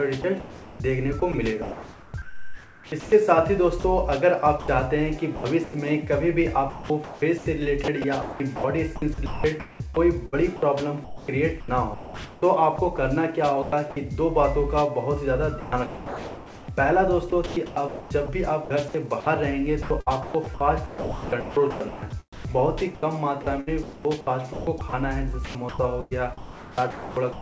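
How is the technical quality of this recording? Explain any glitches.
The recording is repeatedly broken up by sound chopped by the voice detector. This happens over three stretches: 0.22–5.74 s, 6.70–13.96 s and 15.60–27.41 s.

The sender's voice detector was likely toggling between transmitting and muting. Each time it stopped sending, the receiver filled the gap with comfort noise. That replaced about 2.1 s, 2.4 s and 4.56 s of sound respectively, leaving several holes where real audio drops into synthetic hiss.

The band limit at 8 kHz fits the G.722 call path.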